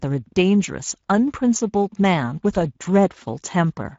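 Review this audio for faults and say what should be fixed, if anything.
Throughout, the speech sounds plainly grainy and hoarse. This is Speex codec damage: too few bits carry the excitation signal, which fits a 16.8 kbps setting. To prevent it, encode at a higher Speex quality setting or switch to a more modern codec such as Opus.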